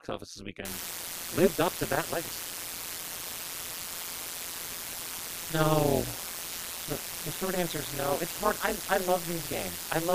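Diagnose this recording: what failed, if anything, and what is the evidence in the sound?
Overlap-add ripple in frame-based processing: throughout, the level pulses about 60 dB deep at around 150 Hz, a metallic buzz rather than broadband noise, from mismatched window overlap.

Low bit depth with dither, at sample-format conversion: from 0.65 s, after "office this", a steady even hiss nearly as loud as the speech, without distortion, fits about 4-bit dithered rounding.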